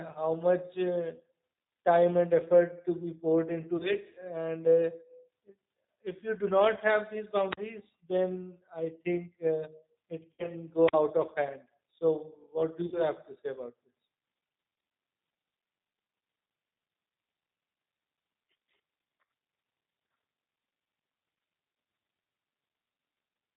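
Throughout, the speech carries G.729 codec damage, which fits an 8 kbit/s rate. The spectrogram shows nothing above 4 kHz, and the pitch-and-pulse rebuilding makes the voice audibly rough and synthetic.

At 3.77 to 3.91 s, VoIP packet loss concealed by the speech codec stretches about 30 ms of missing audio into a fading buzz. The waveform shows a smeared, decaying stretch where the decoder kept extrapolating its last pitch and filter.

At 7.51 to 7.57 s, a wireless microphone squelch dropout mutes the output for about 41 ms. It sounds like a brief rise of hiss, then a hole. The waveform drops almost flat, and the spectrogram shows a blank vertical gap as the receiver's squelch closes on the faded radio signal.

At 10.33 to 10.52 s, concealment covers about 60 ms of lost audio. Because each concealed frame builds on the last, the sound stays weak and buzzy for longer, and the spectrogram shows harmonic streaks thinning out.

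At 10.87 to 10.93 s, another squelch dropout of about 41 ms leaves the same flat gap.

At 12.86 to 13.02 s, concealment again covers about 60 ms with a tonal, fading smear.

At 19.24 s, a short concealment of about 30 ms briefly buzzes and dips.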